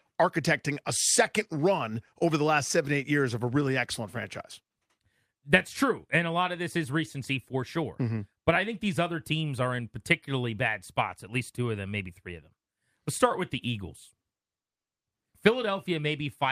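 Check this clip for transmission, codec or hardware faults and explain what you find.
No transmission, codec or hardware faults can be heard anywhere in the recording, and the speech signal stays continuous and intact throughout.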